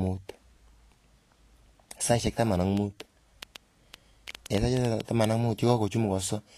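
Speech clip carrying Vorbis compression damage throughout: the treble is plainly grainy and hissy, with nothing above 14.1 kHz, which fits a low-quality encode near 36 kbps where the codec quantises high-frequency detail into noise, likely the cause. From 2.77 to 5.01 s a train of clicks runs over the sound, around fifteen pulses at about 5.8 per second with irregular spacing, peaking roughly 10 dB above the signal, likely interference or an intermittent connection injecting repeated pulses.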